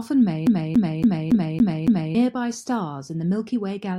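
Speech with a CD stuck on one turn from 0.47 s to 2.15 s: the same 280 ms slice of sound plays six times in a row, each pass cut off by a brief mute as the laser jumps back over the scratched spot. On a waveform this shows as identical blocks tiled end to end with small gaps between them, and a spectrogram shows the same pattern stamped repeatedly at a steady 280 ms spacing.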